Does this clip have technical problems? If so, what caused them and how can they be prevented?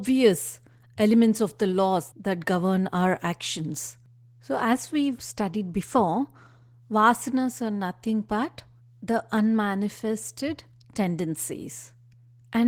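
Yes. Opus voice compression throughout makes the speech hoarse and slightly robotic, which fits about 16 kbps hybrid coding; a spectrogram shows patchy, smeared energy above 8 kHz. Encoding at a higher bitrate, such as 32 kbps or more, would prevent it.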